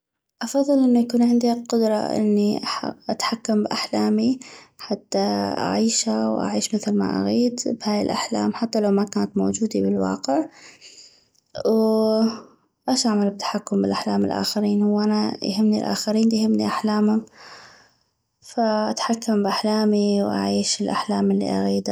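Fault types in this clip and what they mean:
Dropped samples: the stream most likely lost a tiny run of samples, a fraction of a millisecond each time, so the waveform leaps ahead. Nothing audible goes missing, but three sharp clicks result, after "واش اعمل بتحكم باحلام", after "الاخرين هو انا يهمني", and after "فاتحكم باحلامي".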